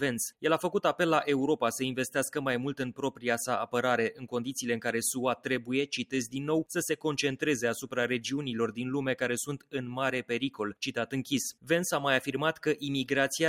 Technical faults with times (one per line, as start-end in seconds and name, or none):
0.00-13.49 noise suppressor applied to music or sounds
2.93-3.25 sound cut by the noise suppressor
4.13-4.31 sound cut by the noise suppressor
5.37-5.69 sound cut by the noise suppressor